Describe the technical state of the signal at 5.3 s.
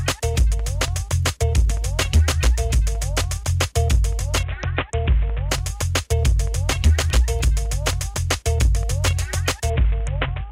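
At 5.3 s a Bluetooth SBC bit pool drop, 4.43 to 5.49 s, starves the upper sub-bands, consistent with roughly 54 kbps, dulling the treble and adding gritty quantisation noise.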